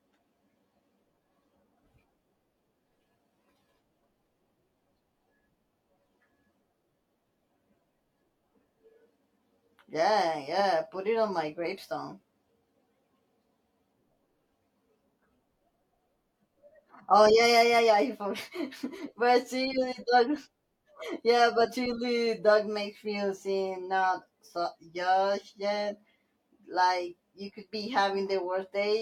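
No technical faults can be heard anywhere in this recording of speech. Nothing in the signal calls for comment at any point.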